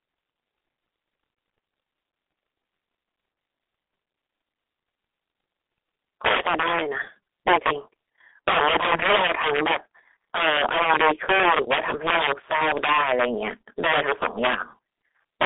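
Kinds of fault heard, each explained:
G.723.1 codec: a low-rate telephony codec running near 6.3 kbit/s, passing nothing above 3.8 kHz, so the speech sounds muffled and hoarse with smeared consonants throughout, a coarse, grainy roughness that separates it from plain band-limiting, which stays clean.
Integer overflow: loud peaks exceed the integer limit and wrap to the opposite sign instead of flattening, giving violent cracks from 6.25 to 6.82 s, 7.47 to 7.71 s, 8.48 to 9.76 s, 10.36 to 13.49 s and at 15.41 s, harsher than clipping.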